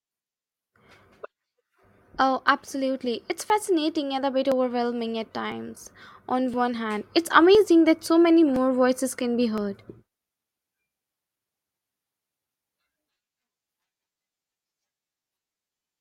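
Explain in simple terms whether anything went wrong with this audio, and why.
Periodic USB or driver dropouts: every 1.01 s from 0.44 to 15.66 s, the audio link stalls, skipping about 10 ms, heard as a tick.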